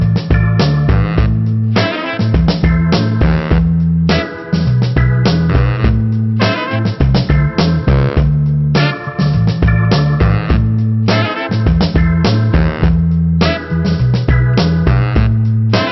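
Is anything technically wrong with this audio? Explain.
No, nothing is technically wrong with this audio.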